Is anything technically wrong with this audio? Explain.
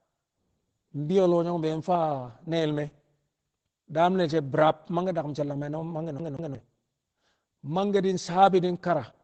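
Yes, there are two faults.

Opus voice compression is present throughout the speech. The sound is band-limited, with nothing above about 8.7 kHz, which matches Opus running its SILK linear-prediction coder in wideband mode. The coding damage is plainly audible. The excitation is quantised coarsely, leaving the voice muffled, slightly hoarse and a little robotic. That degree of damage fits a low bitrate of roughly 12 kbps, where SILK has too few bits to model the fine detail of the signal.

A CD stuck on one turn occurs from 6.19 to 6.55 s. A segment of about 0.18 s plays twice, with a brief mute at the jump back. This matches a laser tracking error that throws the pickup back one track at the same point on each rotation, so the same short slice of audio repeats. The result is the fast, even stutter of a skipping disc, interrupting the flow of speech for roughly a third of a second.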